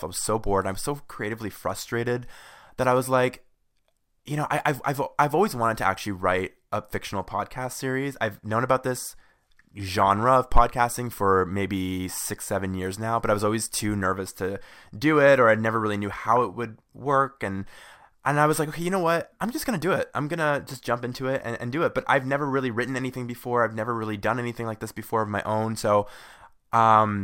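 Speech, with DAB burbling in three spots: 8.24 to 8.26 s, 9.88 to 10.17 s and 16.27 to 16.69 s. Weak reception lets a small fraction of a percent of bits slip past error correction, so wrong samples put short noise blips into single MP2 sub-bands and wrong scale factors make sub-bands jump in level for up to a frame, over the speech.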